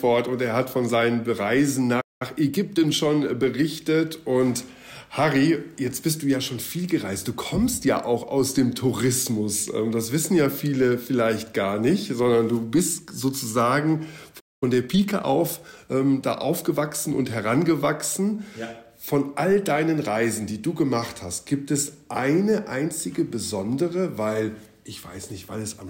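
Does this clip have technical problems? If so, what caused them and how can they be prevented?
Yes. Playback stalls at 2.00–2.22 s and 14.40–14.63 s silence the sound for about 0.2 s each, likely from buffer underrun or a blocked audio thread. Larger playback buffers and a higher-priority audio thread prevent this.

Time-compressed catch-up follows each stall, at 2.22–3.00 s at 1.25× and 14.63–16.07 s at 1.15×. Short cross-faded cuts hurry the sound without changing pitch. Avoiding the stalls removes the need for catch-up.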